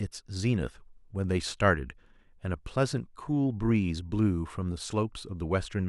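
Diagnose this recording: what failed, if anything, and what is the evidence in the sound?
Nothing in this speech recording stood out as a fault on listening, so there is no failed stage to point to.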